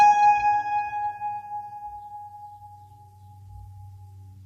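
A music clip with low-delay AAC compression damage plainly audible throughout: tones sound rough and grainy, with hiss between harmonics and a thin, synthetic top. Likely cause: AAC-ELD's short frames at a low bitrate, around 32 kbps. A spectrogram would show smeared harmonic lines, noise filling the gaps, and a patchy upper band.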